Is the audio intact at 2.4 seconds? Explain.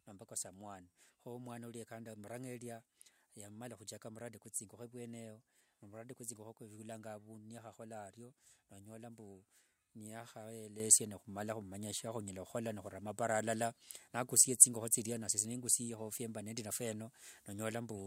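Yes, at 2.4 seconds the speech plays through intact, with no audible fault at that moment.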